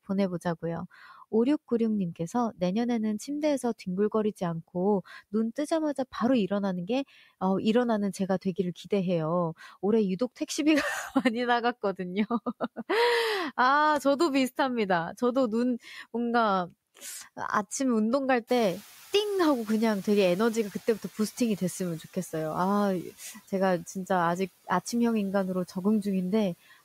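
Speech recording with one fault: the noise suppressor catching up. Room noise jumps by roughly 20 dB near 18.5 s. From 18.47 to 21.84 s it passes with little reduction. The suppressor's noise estimate lags, needing 3.37 s to adapt. Then the noise sinks by about 7 dB.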